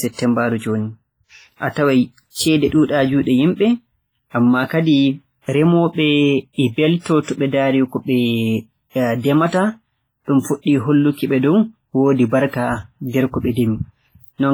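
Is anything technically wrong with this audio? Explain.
Yes. Throughout the speech, the likely cause is WMA compression at a low bitrate, consistent with about 24 kbps. Long transform blocks smear quantisation noise across tens of milliseconds and weak spectral lines drop out, leaving heavy ringing, a washy texture, and hiss that swells and fades with the speech.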